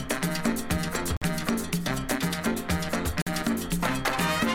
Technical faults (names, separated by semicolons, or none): gap between chunks